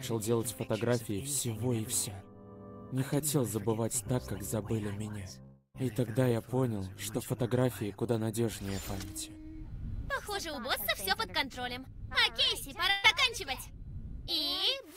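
At 5.43 s the sound stretches into a fading buzz that thins out and ends in a brief silence near 5.76 s, then resumes further on. This is likely a long network dropout: about 300 ms never arrived, and the receiver extended the last sound to cover the gap.

From 12.90 to 13.06 s a short held, fading tail replaces the audio with no silence, and playback picks up slightly ahead. This is a burst of packet loss: around 140 ms went missing, and the receiver concealed it by continuing and softening the previous sound.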